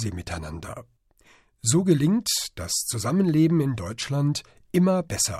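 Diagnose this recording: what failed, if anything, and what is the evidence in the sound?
Nothing failed; no stage shows any audible fault.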